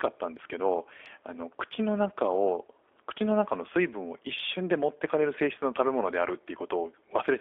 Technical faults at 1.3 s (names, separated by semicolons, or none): G.729 codec